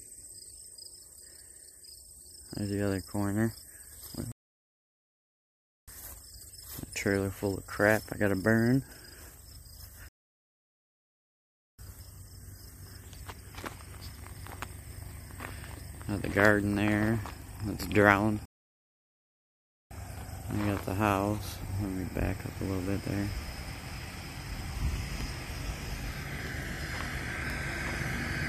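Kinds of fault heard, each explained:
Playback stall: the sound stops mid-flow and the output goes silent for 1.45 to 1.70 seconds, at 4.32, 10.09 and 18.45 s, before carrying on. The player has likely run out of data or had its thread blocked each time.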